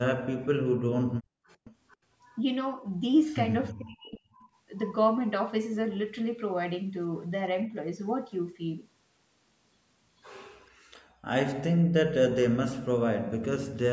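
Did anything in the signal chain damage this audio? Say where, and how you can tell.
Yes. The damage is in the call processing stage. Speech suppressed in double talk appears from 0.0 to 1.24 s, 3.73 to 4.37 s and 11.78 to 11.93 s. The voice sinks by roughly 40 dB. The echo canceller likely ducked it because it could not separate the talker from the far-end echo.

Background gated by the echo canceller shows at 1.54 to 1.6 s and 10.71 to 11.25 s. The room tone drops out by about 35 dB, then about 36 dB, and comes back. The canceller clamps the microphone hard while the loudspeaker plays.

Echo leak is heard at 1.64 to 1.97 s and 3.68 to 3.72 s. A copy of the voice returns 448 ms late. It sits roughly 25 dB, then 35 dB, below the speech. The far side's echo canceller likely failed to remove its loudspeaker pickup.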